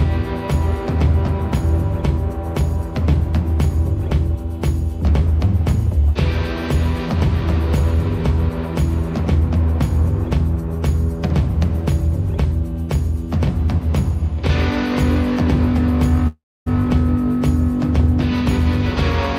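At 16.27 s the audio freezes into a fading buzz, then falls silent for about 0.27 s before resuming at 16.68 s with nothing lost. This call audio freeze likely comes from delayed packets emptying the jitter buffer. A spectrogram shows smeared, decaying bands, then a blank gap.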